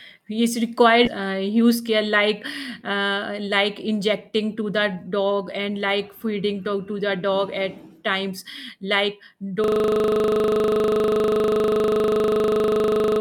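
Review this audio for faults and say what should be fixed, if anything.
Skip ahead at 1.05 s: roughly 0.7 s of speech is dropped while later audio was already queued, so playback jumps forward with no gap.

Jitter buffer speed-up from 1.6 to 1.9 s at 111% speed, and from 2.95 to 5.77 s at 106%: short pitch-period pieces are repeatedly cut, hurrying the speech without changing pitch.

System hang loop from 9.64 s to the end: the same 40 ms of audio repeats while the system is frozen, producing a steady 25 Hz buzz.

To prevent these, size the jitter buffer to absorb bursts without overflowing or dropping audio, and stop the output stream when the driver or host stops supplying audio so the hardware buffer doesn't keep cycling.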